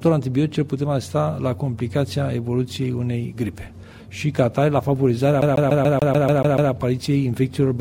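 A CD stuck on one turn takes hold from 5.41 s to 6.72 s: a 145 ms slice of the audio repeats nine times in a fast, even stutter, with a brief mute at each jump back. That is the signature of a scratch sending the laser back one track at the same point on every rotation of the disc, so the player keeps rereading the same short stretch instead of moving forward.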